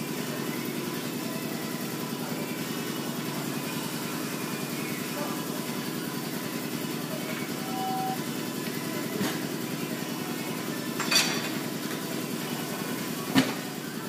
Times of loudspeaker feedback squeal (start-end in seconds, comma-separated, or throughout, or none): 7.55-8.20